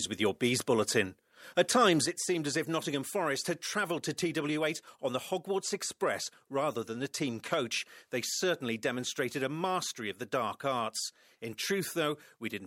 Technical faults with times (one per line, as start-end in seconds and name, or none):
2.06-12.66 one channel drops out